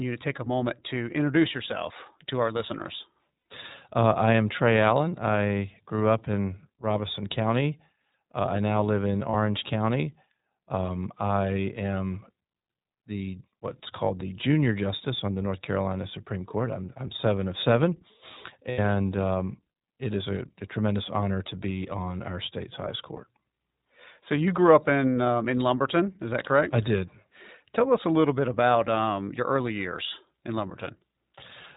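Throughout, the iLBC codec band-limits the speech to 4 kHz and codes each 20 ms frame independently, which fits a bitrate near 15 kbps. The result is an audibly rough, synthetic texture.

Lost iLBC frames occur at 3.38–3.46 s, at 9.30–9.35 s after "I now live in", at 18.70–18.79 s just before "um it is a", and at 23.16–23.19 s after "on our state's highest". The gaps last 80, 40, 80 and 20 ms. In each, the decoder repeats the last pitch cycle with added noise, producing a brief held, buzzy vowel before clean speech resumes.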